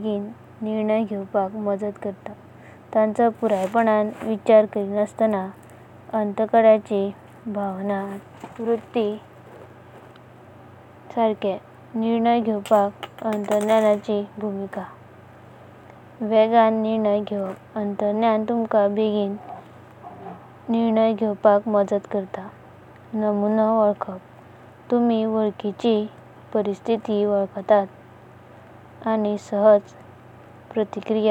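Nothing technically wrong turns up anywhere in this speech recording, so there's simply no fault to point to or explain.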